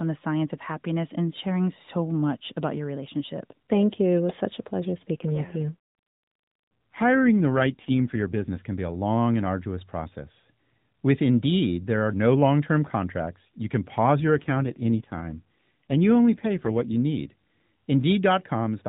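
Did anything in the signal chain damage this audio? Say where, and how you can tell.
Yes. AMR rate drop at the codec stage, 5.14–8.67 s (after "was such a pleasure") and 14.20–16.94 s (after "can pause"). Speech turns buzzier and more synthetic without gaps, which fits a network-forced step-down to about 5.9 kbps.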